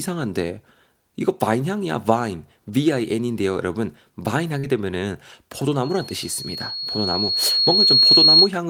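At 4.59 s, short concealed packet loss leaves a brief smear lasting until 4.66 s. About 40 ms of the speech never arrived in time, and the receiver filled 37 ms of it by extending the preceding sound before blending back into the real signal. It is heard as a brief wobble. A spectrogram shows harmonics or noise held unnaturally steady across that sliver, with a faint seam where real audio resumes.

From 5.83 s to 8.5 s, a loudspeaker feedback squeal develops. The microphone is picking up its own loudspeaker, and at 4.3 kHz the loop gain exceeds one, so that tone feeds on itself. It swells over about two seconds into a piercing whistle, ending at about 10 dB above the speech. A spectrogram shows a single bright horizontal line at 4.3 kHz thickening as it rises, and the waveform envelope grows over about two seconds.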